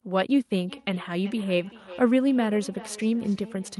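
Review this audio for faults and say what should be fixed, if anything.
A feedback echo between two devices runs from 0.67 s to 3.79 s: one device replays the other's call audio, and that microphone recaptures it, so the sound returns roughly every 0.4 s, peaking about 19 dB below the speech. On a spectrogram, faint copies of each syllable trail at that spacing. Prevent it by muting all but one device in the room.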